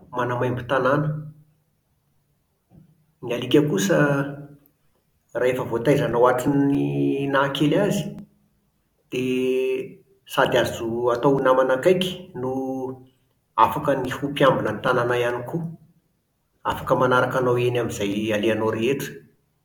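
Speech, marked by two bursts of CD scratch ticks. Seven ticks fall between 5.7 and 6.95 s, and eight between 13.84 and 15.3 s. They come about five or six times a second. Each lasts a few milliseconds. A scratch spoils data beyond error correction once per disc turn, so the player patches or mutes those samples.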